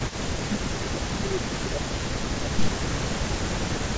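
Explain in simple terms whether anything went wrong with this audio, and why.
Two problems can be heard in this speech. The first is an echo leak, present from the very start to the end of the clip. A faint second copy of the speech trails the original by about 0.14 seconds, quieter than the main voice. The likely cause is that the far end was playing the call through a loudspeaker, and its echo canceller failed to remove all of that sound picked up by its microphone and returned it down the line.

The second is speech suppressed in double talk, between 0.14 and 2.84 seconds. Across roughly two seconds of that stretch, the voice drops in loudness, at its worst becoming noticeably quieter. This likely happened because both sides were talking at once. The echo canceller could not tell the local talker apart from the loudspeaker echo, so it turned both down together. The call's normal microphone processing is also audible, with nothing above 8 kHz, and that part is not a fault.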